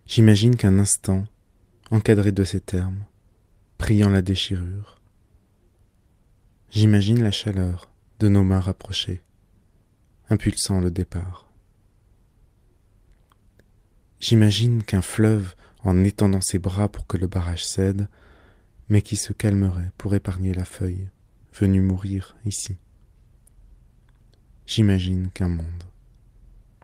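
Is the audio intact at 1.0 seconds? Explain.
Yes, at 1.0 seconds the audio plays through cleanly with no dropout, click, distortion or other disturbance.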